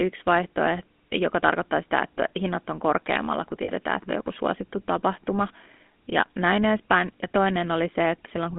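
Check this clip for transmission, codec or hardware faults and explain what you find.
Two faults are present: GSM full-rate coding throughout, and a brief patch of lost GSM frames.

GSM full-rate codec, throughout: The speech is confined to roughly 200 Hz to 3.5 kHz. The codec rebuilds the voice from a vocal-tract model excited by sparse, regular pulses. That leaves a plainly audible buzzy, gravelly roughness, which fits a 13 kbps GSM full-rate link.

Lost GSM frames, 3.64 to 3.70 s: About 40 ms of audio is missing, which fits two lost 20 ms frames. The decoder repeats the last good frame's settings to fill the gap. This produces a short, rough metallic ring instead of a clean continuation.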